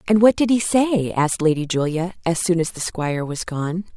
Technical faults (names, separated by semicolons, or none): none